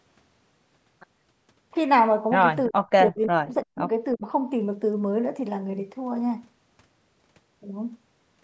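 Speech suppressed in double talk at 2.69 to 2.88 s, 3.1 to 3.86 s and 4.14 to 4.22 s. The speech drops by up to roughly 40 dB, likely because an echo canceller muted it while both sides talked at once.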